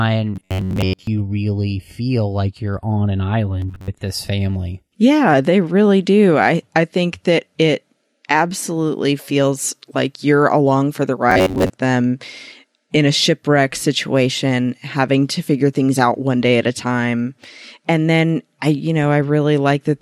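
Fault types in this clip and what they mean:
Robotic sound from repeated short buffers: audio most likely reached the software too late, so it kept replaying a slice of about 10.7 ms in place of missing material, imposing a steady 93.8 Hz buzz. The speech turns metallic in three bursts, 0.36 to 1.08 s before "really feel like you're", 3.60 to 3.91 s after "like you're on an", and 11.30 to 11.70 s after "you're along for the", much of each burst being repeats.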